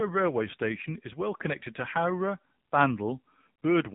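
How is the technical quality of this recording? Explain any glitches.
The speech sounds like a phone call throughout, muffled and somewhat buzzy and synthetic.

The AMR narrowband mobile codec is audible throughout: nothing passes above about 3.8 kHz, and the voice takes on a buzzy, synthetic quality. The codec rebuilds each 20 ms frame from a vocal-tract model excited by a few pulses. The damage is plainly audible, which fits a low bitrate around 7.4 kbps.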